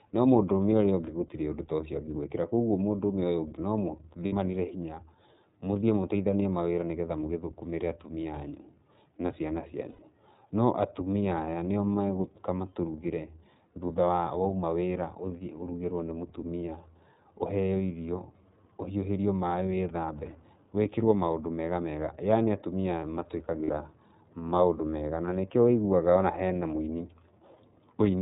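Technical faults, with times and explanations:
Throughout: iLBC codec. The speech has been squeezed through a narrowband VoIP codec that works in 30 ms frames, with a bitrate that fits iLBC's 13.33 kbps mode. Each frame's excitation is coded on its own, leaving the voice plainly rough and slightly synthetic. Everything above 4 kHz is gone. On a spectrogram the energy stops at a hard ceiling near 4 kHz across the whole clip, and the harmonics beneath it look smeared and grainy.
4.25 to 4.33 s, 9.89 to 10.00 s and 23.63 to 23.71 s: lost iLBC frames. In each gap, about 60 ms, 90 ms and 60 ms long, the decoder had nothing to play and filled in by repeating the last pitch cycle mixed with noise, fading it across the longer gap. Each one comes out as a brief held, buzzy, breathy vowel, and the voice recovers right after it. A spectrogram shows flat, unchanging harmonic stripes there, and the waveform shows similar repeating cycles.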